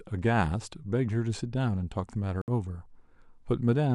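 At 2.42 s the receiver stopped getting usable data, either because the digital signal vanished or because incoming frames failed their integrity check, so it muted its output until valid frames resumed at 2.48 s. This digital broadcast dropout leaves a silent hole of roughly 64 ms, which points to about two lost frames. The speech drops out and picks up later in the stream, with whatever was transmitted during the gap simply gone.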